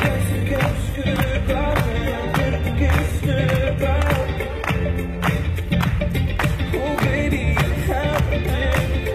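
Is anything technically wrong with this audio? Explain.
Yes, there's one problem: an adaptive stream starting at a low bitrate. For the first 6.0 s the player is on a cheap version of the stream while it sizes up the connection. The top end is thin and partly synthetic, with stronger codec artefacts, which points to something like HE-AAC at 20 kbit/s. At 6.0 s it jumps straight to a cleaner version, with no gap, which fits AAC-LC at 96 kbit/s. There's nothing above 14.8 kHz in the clip.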